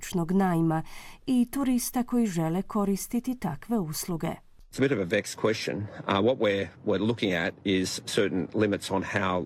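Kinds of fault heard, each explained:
Nothing stood out on listening to the speech in this recording.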